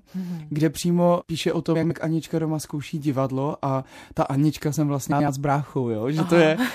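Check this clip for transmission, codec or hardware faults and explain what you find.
Two brief spots of frames out of order turn up, at 1.75 to 1.91 s and 5.12 to 5.28 s. Each time, two adjacent runs of about 78 ms (which fits three frames apiece) were swapped, so the speech briefly flutters.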